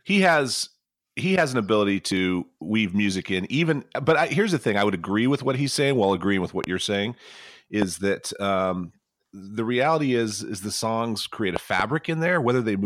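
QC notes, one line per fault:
6.64–6.66 s, loud pop: a single sharp pop after "while agreeing with what", about 15 dB above the speech, which carries on underneath. A likely voltage pulse from a plug, switch or static discharge entered the chain.
7.82–7.84 s, loud pop: same single sharp transient at a similar level, just before "that um the reality".
11.56–11.82 s, loud pop: two pops in quick succession after "the songs create a", peaking about 15 dB over the speech.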